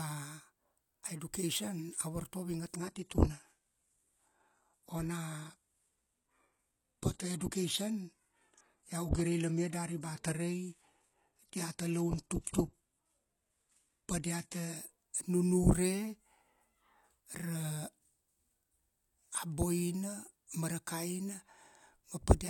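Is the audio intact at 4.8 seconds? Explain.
No. At 4.8 seconds the speech sounds dulled and smeared, with nothing above about 12.3 kHz and more codec artefacts than before. This is an adaptive stream at a lower bitrate, running from 2.76 to 14.76 s. When the connection slowed, the player switched to a leaner version of the stream, which fits a change from about 96 kbit/s AAC to roughly 16 kbit/s HE-AAC. The switch is abrupt, with no gap.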